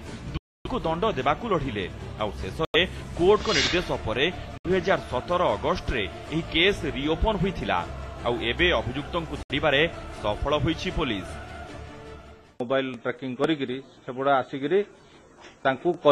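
Four gaps of sudden silence, at 0.37–0.67 s, 2.65–2.76 s, 4.58–4.66 s and 9.43–9.51 s, are likely Bluetooth dropouts: late packets were discarded, leaving sharp-edged blank columns on a spectrogram and flat-line holes in the waveform, with sound resuming further on.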